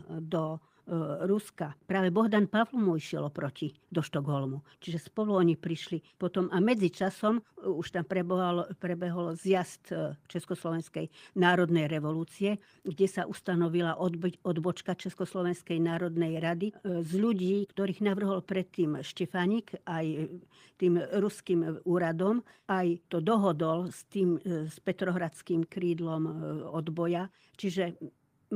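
No technical faults can be heard anywhere in this speech recording.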